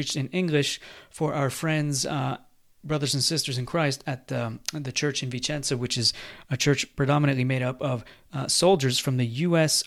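No technical faults can be heard anywhere in the recorded speech, and the signal holds steady for its whole duration.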